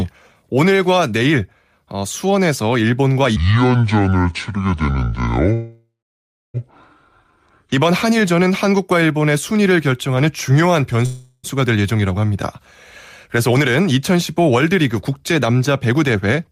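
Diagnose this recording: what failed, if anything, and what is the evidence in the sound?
From 3.36 to 7.72 s the speech turns deep and slow, about ten semitones low at 0.61 speed. A section at the wrong speed, likely from a playback clock mismatch.

At 5.53 to 6.57 s the sound smears into a fading buzz, then about 0.65 s of silence; at 11.06 to 11.47 s a shorter fill. Call audio freezes, likely network delay emptying the jitter buffer, with nothing lost.

From 15.73 to 16.48 s the speech hurries at 111% with pitch unchanged. Jitter buffer speed-up: the receiver trimmed roughly 100 ms of pitch periods to cut its delay.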